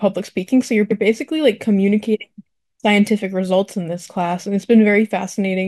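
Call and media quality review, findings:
Stutter in the speech at 0.90–1.01 s: a 0.1 s slice plays twice. Repeated frames, consistent with about four codec frames written or sent twice upstream of the decoder. Clip runs about 0.1 s longer.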